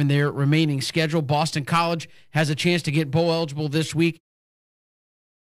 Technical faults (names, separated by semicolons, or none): none